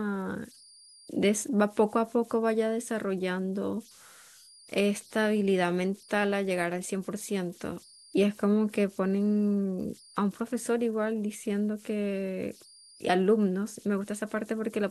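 Throughout the speech, converter idle tones sit about 29 dB below the signal: an undithered delta-sigma converter settles into repeating bit patterns on low-level input, producing a whistle around 5 kHz in pauses and a grainy texture beneath quieter passages.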